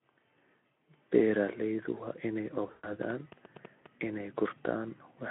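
VoIP packet loss concealed by the speech codec hits this speech clip from 2.67 to 2.92 s, just after "waa inay". About 140 ms of audio goes missing within a 160 ms stretch, the longest gap running 120 ms, which fits a handful of consecutive 20 ms frames dropping out. The decoder fills each gap by repeating its last pitch and spectral shape at falling gain, so the sound smears into a fading buzz or coloured noise. Because each concealed frame feeds the next, the signal stays weak or distorted briefly after packets resume, heard through the narrowband 200 to 3400 Hz Speex line.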